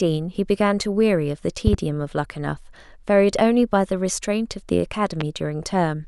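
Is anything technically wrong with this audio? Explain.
Yes. A voltage spike from a plug, switch, static or driver glitch is likely, producing a loud pop: a double pop from 1.67 to 1.76 s and a single one from 5.21 to 5.24 s, each about 15 dB above the speech, which continues underneath.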